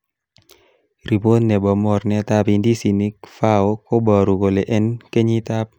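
No audible technical faults occur anywhere in this recording.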